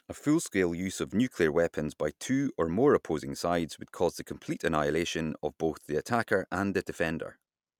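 Nothing stood out as a fault on listening to this speech recording.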